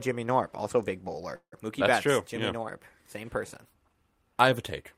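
At 1.35 s, right after "also big", a call audio freeze interrupts the speech until 1.54 s. The last sound is drawn out as a fading buzz or hiss over about 168 ms, including about 80 ms of silence, before the speech resumes where it stopped with nothing lost. The likely cause is packets held up in transit, leaving the jitter buffer empty so the receiver had to fill the gap. Everything after it plays about 168 ms later.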